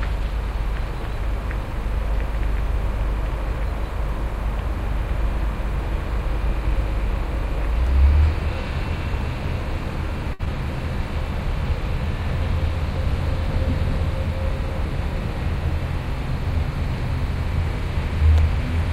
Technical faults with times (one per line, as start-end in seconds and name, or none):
7.87 block of digital silence
10.33-10.42 burst of packet loss